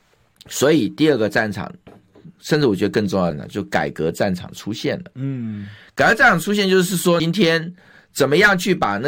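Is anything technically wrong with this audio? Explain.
Yes. Damaged data in a compressed stream at 3.31 s and 7.19 s: corrupted bytes make the decoder misread frames and resynchronise, producing brief chirps or blips in the speech.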